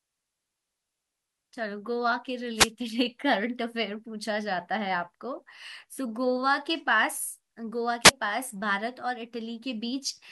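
The radio link from an analogue FM wireless microphone drops out twice as reflected signals cancel at the receiver. With the carrier briefly too weak, receiver noise rises. These are wireless microphone noise hits, heard as short bursts of static: the first from 2.55 to 2.71 s, about 0.16 s of swishing hiss, and the second from 8.03 to 8.12 s, a briefer 85 ms burst.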